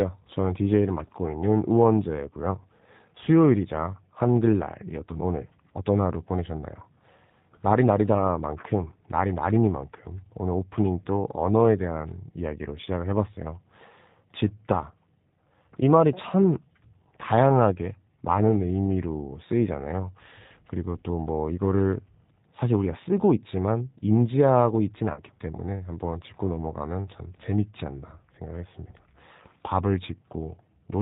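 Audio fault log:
throughout G.729 codec: The speech is carried at 8 kbit/s by a codec that rebuilds each 10 ms frame from a vocal tract filter, a pitch predictor and a few pulses, rather than storing the waveform itself. That leaves nothing above 4 kHz and gives the voice a slightly rough, synthetic grain that is plainly audible. A plain low-pass filter would dull the top end but leave the voicing smooth. Here the buzzy, pulse-built texture marks a model-based speech codec.
25.14 to 25.22 s VoIP packet loss concealed by the speech codec: About 30 ms of audio went missing, which fits a single lost packet. The decoder filled the gap by repeating its last pitch and filter settings at falling gain, so instead of a silent hole there is a brief stretched continuation that fades. Because each frame depends on the one before, the voice stays weak or distorted until about 25.22 s, well after the gap itself. 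A simple dropout would instead cut to silence and recover cleanly.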